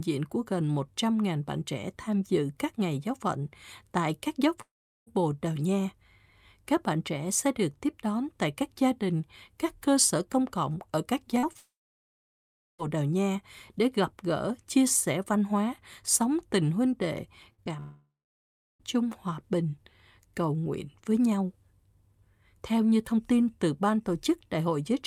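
At 4.61 s, right after "phận tại các giáo", the speech cuts out until 5.13 s. It's a long network dropout: about 460 ms never arrived, most likely because packets stopped coming. The receiver stretches the last sound briefly before it dies away, leaving roughly 400 ms of silence, and then the speech picks up further along with that piece simply gone.

Around 11.39 to 11.45 s, just after "công cộng ở các", there's a short concealed packet loss. About 40 ms went missing and was patched by extending what came before, so you hear a quick smear. A second one, about 20 ms, follows at 11.53 to 11.57 s. It leads straight into another long network dropout from 11.57 to 12.80 s. Roughly 1.2 s is lost, likely to a stall in the connection, and around 1.1 s of that is dead silence after the brief fill fades.

At 17.52 to 17.60 s there's a burst of packet loss, about 60 ms in a row. The last sound is held and sinks in level before the speech jumps ahead past the gap. 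A short concealed loss of about 20 ms follows at 17.64 to 17.68 s, a small wobble rather than a real hole.

Then, after "sống tình huynh đệ", a third long network dropout runs from 17.80 to 18.81 s. About 1 s is missing, likely because the stream stalled again. A fading tail gives way to roughly 0.7 s of silence, and the speech returns at "chung hòa bình".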